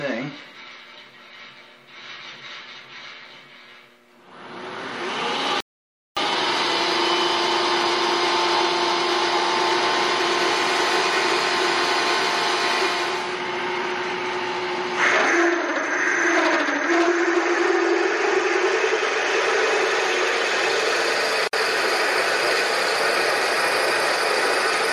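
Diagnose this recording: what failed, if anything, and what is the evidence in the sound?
From 5.60 s to 6.17 s the sound halts in mid-flow and the output sits silent for about 560 ms, then resumes. This is a playback stall at the playback stage, most likely the player's buffer running dry or its output thread being blocked, so nothing reached the converter until it recovered. The silence is far longer than any codec frame or join artefact, which points to the player rather than to the encoded stream itself.

At 21.48 s a short hole of about 56 ms opens in continuous sound, with edges smeared by the codec, and the sound carries on from where it stopped at 21.53 s. This is a gap at a join of encoded pieces, a codec-stage fault. Two separately encoded segments were spliced without trimming, so the first segment's padded final frame and the second segment's encoder start-up delay both survive as silence.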